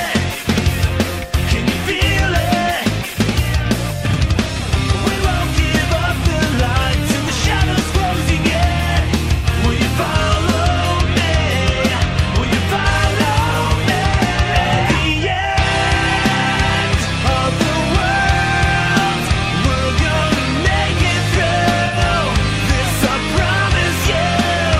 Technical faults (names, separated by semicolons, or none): AAC frame loss with concealment